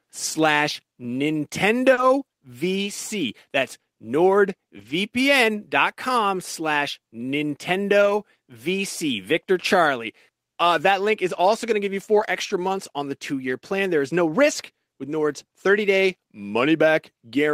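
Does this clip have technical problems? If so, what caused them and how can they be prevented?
Yes. The speech has lost packets rebuilt from error correction at 0.33 s, 1.97–2.03 s, 4.77–4.91 s, 8.01–8.11 s, 12.15–12.25 s (between "going to give you" and "extra months on the"), and 14.51–14.53 s after "is no". The rebuilt stretches run from 20 to 80 ms. The following packet carried a low-bitrate copy of each lost one, so nothing drops out. Those moments just turn briefly rougher and noisier, which is unlike the smear you get from concealment.

There is also a short concealed packet loss at 1.93–1.99 s. About 40 ms never arrived, so the decoder extended the preceding sound to fill the hole and then blended back into the real audio. The result is a brief smeared wobble rather than gritty, degraded detail, and it runs straight into the rebuilt stretch that follows.

Both faults come from packet loss on the network, so reducing loss with a steadier connection, a larger jitter buffer, or stronger redundancy settings would prevent them.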